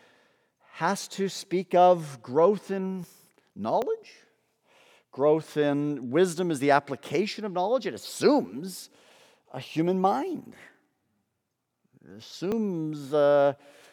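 At 3.04 s, just after "speak of growth in", the speech jumps forward. About 40 ms of sound is missing, and the two sides butt straight together with no gap. Shorter skips of around 20 ms follow at 3.82 s and 12.52 s. This is likely a dropped buffer (overrun). The software did not read the audio in time, so the hardware overwrote it.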